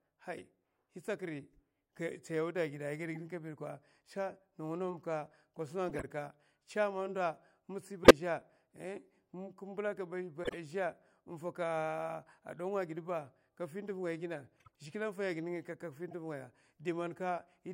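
Damaged compressed frames were decoded as though they were intact: flipped bits gave wrong gains and misread codes, putting energy at wrong frequencies for a few frames each time. The result is a corrupt frame decoded artefact, heard as brief chirps and noise bursts in the speech at 0.36–0.41, 3.14–3.24, 5.89–6.04, 8.04–8.11, 10.44–10.56, 14.57–14.68 and 16.10–16.13 s. The one at 8.04 s is loud, near about −10 dBFS, while the last two are faint.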